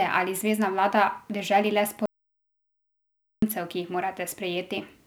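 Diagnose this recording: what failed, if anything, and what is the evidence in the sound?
Speech cuts off at 2.06 s into silence, with no room tone, and comes back mid-flow at 3.42 s, so about 1.4 s is gone. That's an audio dropout to silence, likely the input device or link failing while the recorder kept writing zeros.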